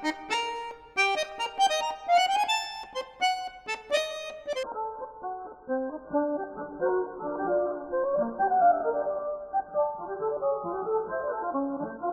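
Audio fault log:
4.63–12.12 s, adaptive stream at a lower bitrate: at 4.63 s the sound switches abruptly, with no gap, to a dull, smeared version with nothing above 1.6 kHz and a watery texture that holds to the end. The player has dropped to a much lower-bitrate rendition, consistent with falling from around 96 kbit/s to roughly 8 kbit/s AAC. A plain low-pass filter would not add those codec artefacts, and a dropout would leave a silence.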